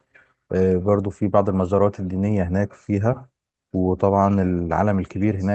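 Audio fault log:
No faults logged; the speech comes through a call codec path whose top end stops at about 8 kHz, as that path normally does.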